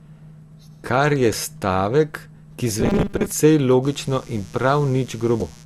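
Damaged data in a compressed stream appears at 1.33 s, just before "stavek ki": corrupted data makes the decoder misread a frame and lose sync while it hunts for the next header, leaving a brief glitch.

Robotic sound from repeated short buffers runs from 2.80 to 3.32 s, right after "je stavek ki". The speech turns into a rigid metallic buzz at 200 Hz. That pitch fits 5 ms chunks being replayed, likely because audio arrived too slowly and roughly half of it was filled with repeats.

Mains buzz starts at 3.81 s and lasts to the end. Switching spikes from the 60 Hz supply add a steady, raspy buzz with harmonics reaching into the kilohertz range, sitting about 30 dB below the speech.

Damaged data in a compressed stream returns from 5.38 to 5.42 s. Another corrupted stretch forces the decoder to resynchronise, producing a short glitch.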